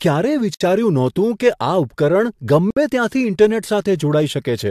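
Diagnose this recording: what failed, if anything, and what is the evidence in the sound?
The speech breaks twice with a gap at a join of encoded pieces, a fault at the codec stage, where separately encoded segments were concatenated untrimmed. Silence opens at 0.54 to 0.61 s (about 62 ms) and at 2.70 to 2.77 s (about 61 ms), and the speech resumes exactly where it stopped. Each run's leading encoder delay and final-frame padding stayed in. A waveform shows flat dropouts with smeared edges, and a spectrogram shows vertical blank bands across all frequencies.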